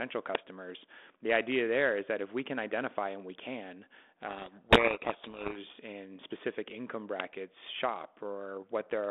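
At 0.35 s there's a short, loud crack of digital noise, an uninitialised buffer: a 5 ms block went out to playback before any audio was written into it, so whatever junk sat in that memory got played as samples. The same thing happens again at 7.20 s, right after "in specific income".

In between, from 4.28 to 5.59 s, just after "identify and we can", there's a codec payload misread. The speech, which is going through a light-sounding 32 kbit/s G.726 telephone link limited to 250 Hz to 3.5 kHz, gets buried in harsh distortion. The decoder seems to be reading the G.726 code words with their bit order reversed relative to the sender, so each difference value comes out wrong. Clean decoding picks up again at "in specific income".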